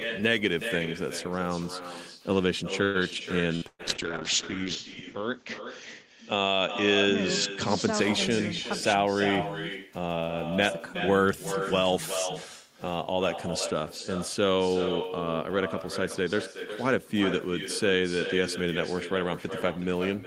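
Echo with no canceller runs through the whole call. The far end's loudspeaker feeds its microphone and nothing removes it, so each phrase returns roughly 0.4 s later as a quieter, thinner copy, about 9 dB below the speech.

At 2.83 to 2.97 s there is a call audio freeze. The receiver extends the last sound for 111 ms as a fading buzz or hiss, then resumes where it stopped with nothing missing. The likely cause is packets held up in transit, emptying the jitter buffer.

A burst of packet loss follows at 3.56 to 3.65 s and again at 3.68 to 3.82 s. The receiver fills 59 ms, then 113 ms, with a decaying continuation of the last sound, and the second gap ends in 30 ms of silence. About 60 ms and 120 ms of audio are skipped.

From 3.7 to 8.05 s a call bitrate drop takes the encoder from 32 to 7 kbps. It stays at its lowest for about 1.1 s, and the bandwidth narrows from 20 kHz to 8 kHz. The speech turns rough, watery or muffled and clears by 8.05 s.

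At 9.86 to 10.57 s a jitter buffer speed-up trims excess buffered delay. The receiver cuts pitch-period-length slices, about 70 ms in total, so the speech runs at 110% speed with unchanged pitch and sounds hurried.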